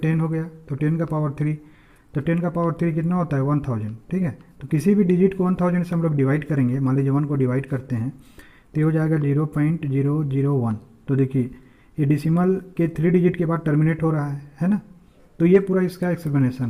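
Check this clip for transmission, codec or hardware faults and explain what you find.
There are two related timing faults, both caused by the sender's clock running at a different rate from the receiver's.

Clock drift between sender and receiver runs through the whole clip. The sender's audio clock is around 4 percent slower than the receiver's, so samples arrive more slowly than they are played out. The jitter buffer keeps draining and can briefly run empty. The sender and receiver never share a timebase, so the pacing never sits quite right.

Repeated timing corrections run from 0.12 s to 16.61 s. To make up for the slow sender, the receiver keeps repeating short slices of audio, always in the same direction and at uneven intervals. Together they pad out the sound by roughly 0.7 s, so it plays at about 96 percent of its proper speed. Each individual repeat is small and is heard, if at all, as a slight hiccup. 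The overall effect is a slightly dragging, unsteady tempo.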